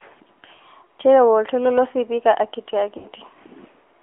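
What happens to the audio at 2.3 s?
Throughout the clip, 2.3 s included, an AMR narrowband mobile codec, apparently near 10.2 kbps, squeezes the speech into a 300 Hz–3.4 kHz band, making it thin, buzzy and synthetic.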